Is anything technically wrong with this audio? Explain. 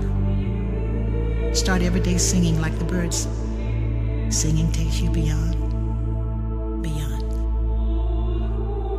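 No, nothing in this audio points to a technical fault. No dropouts, distortion or other processing problems come through anywhere in the recording.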